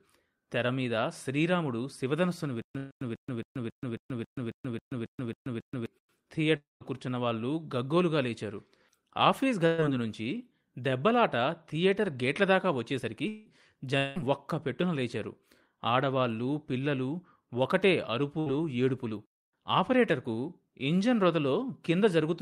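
From 2.62 to 5.86 s the speech catches on a short fragment: a 143 ms burst repeats twelve times at an even 272 ms pace, each followed by about 129 ms of dead digital silence. This stutter with silent gaps likely comes from a stalled player replaying its last buffered fragment on each retry and then running dry, and the speech that belonged to those three seconds never plays.

Within that stretch, at 2.77 to 2.93 s, a sound is held and fades for about 130 ms before the audio jumps ahead. This is a burst of packet loss: about 140 ms of data went missing, and the receiver stretched the last sound across the gap. The same held, fading fill recurs at 9.66 to 9.80 s over about 120 ms and again at 18.40 to 18.48 s, briefer at about 60 ms.

At 6.57 to 6.82 s the sound is drawn out into a buzz or hiss that fades away, and the fill sinks to silence before the speech returns further on. The pattern points to a long network dropout of roughly a quarter second, likely a stretch where nothing arrived. 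Two more dropouts, at 13.28 to 13.48 s and 13.98 to 14.18 s, each smear about 180 ms into a fading fill with no silence, and the speech resumes past the gap.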